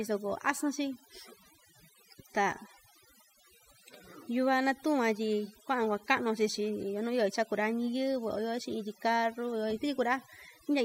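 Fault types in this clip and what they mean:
overdone noise removal: runs through the whole speech clip. A noise reduction stage set far too aggressively pulls individual frequency bands down to nothing whenever they sit close to its noise estimate, leaving near-silent gaps sprinkled with twinkling specks and a voice whose quieter detail has been stripped away.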